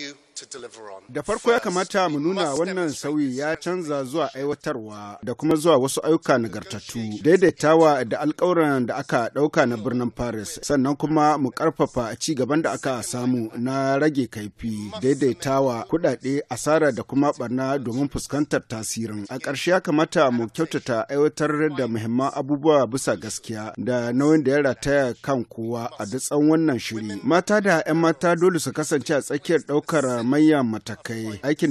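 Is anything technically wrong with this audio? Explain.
Yes, there's a repeating glitch from overlap between stream segments at 0.59, 1.58, 2.57, 3.55, 4.53, 5.51, 6.50 and 7.49 s. Segment time stamps overlap, so a few milliseconds get trimmed at each 1-second boundary, and the waveform jumps, heard as a small regular click or skip.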